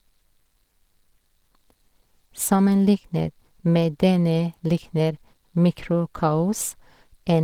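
Speech with plainly audible Opus compression throughout, likely from a low-rate hybrid-mode encode around 16 kbps. The voice sounds hoarse and muffled. On a spectrogram, the upper bands look smeared and noise-filled rather than finely detailed, with nothing above about 20.2 kHz.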